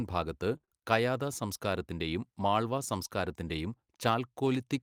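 From 0.57 to 0.73 s, repeated packet loss punches holes, up to 23 ms, filled by extending earlier sound, leaving the stretch choppy.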